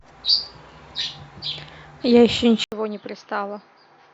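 At 2.64 s the speech cuts out for about 80 ms, then returns duller and boxier, with nothing above 6.4 kHz and the level noticeably lower, down by roughly 10 dB. A faint new background noise, well below the speech, sits under it through to the end. The likely cause is an input switched to a poorer device partway through: a different microphone or headset path with a narrower band, its own tone and its own noise floor.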